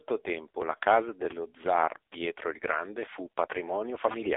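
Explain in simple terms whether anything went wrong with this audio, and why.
Yes, the whole clip went through the AMR narrowband mobile codec, the old phone-call coder. It throws away everything above about 3.7 kHz and rebuilds the voice from a rough model, so speech sounds muffled, boxy and heavily buzzy from start to finish.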